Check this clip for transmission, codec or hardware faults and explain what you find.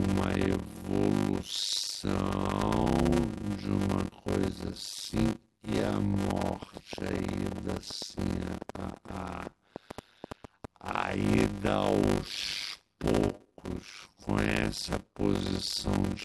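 Two faults are present: a block size mismatch running through the whole speech clip, and a train of clicks in its middle section.

The block size mismatch (padded) lasts throughout. One stage hands over short blocks, the next reads longer ones, and the shortfall in each is filled with silence. The speech plays at about 0.53 times normal speed, which fits 256-sample blocks read as 480-sample blocks, and the repeating gaps form a steady 100 Hz buzz. Unlike slowed playback, the pitch stays near normal; only the pacing drags.

A train of clicks runs from 6.15 s to 10.67 s, about 30 sharp ticks at roughly 14 per second on an uneven pace, peaking a few decibels above the speech. The likely cause is electrical interference or a struggling interface injecting pulses. The clicks share one shape and continue through pauses, which separates them from dropout clicks tied to the audio. Their irregular spacing also keeps them distinct from the even 100 Hz buzz underneath.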